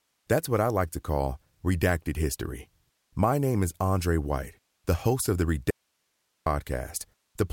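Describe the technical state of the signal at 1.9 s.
At 1.9 s the speech signal is intact, with no audible fault at that moment.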